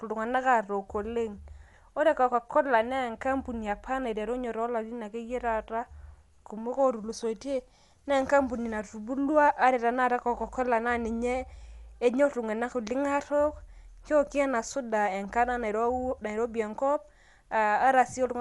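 Throughout the speech, nothing is present above 11.4 kHz, leaving it dull, and a rough, fluttering noise sits around tonal parts. This is likely Dolby Digital compression at a low bitrate, fitting a 64 kbps stream, where starved frequency lines get filled with dither noise.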